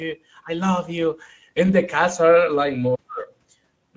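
From start to finish the speech sounds rough and hoarse, with a grainy, noisy texture over the voice, and the upper range up to the 8 kHz limit of the call's microphone processing comes across as hissy rather than crisp. This is plainly audible Speex codec damage. The CELP coder has too few bits to model the excitation cleanly, and the band above 4 kHz is rebuilt as shaped noise, which fits a middle Speex setting around 16.8 kbps.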